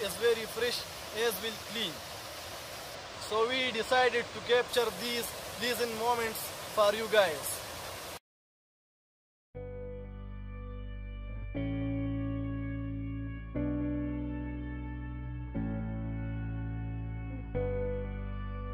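Channel delay causing comb filtering appears from 2.95 to 4.69 s. One channel arrives a tiny fraction of a millisecond late, consistent with a delay of a couple of samples. Summed to mono, the shared content cancels around 10 kHz, so the top end sounds dulled.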